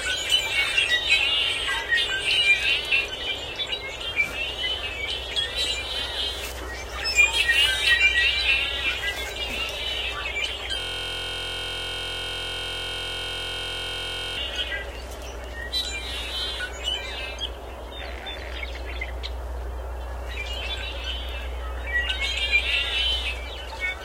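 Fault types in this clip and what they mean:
System hang loop: the system froze while the hardware kept replaying one 23 ms buffer, which fits 1024 samples, turning the sound into a steady 43 Hz buzz.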